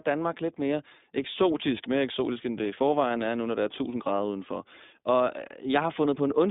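Throughout, the speech carries iLBC codec damage: nothing above 3.8 kHz, plus a rough, synthetic grain from each 20 ms frame coded independently, unlike a clean band-limit.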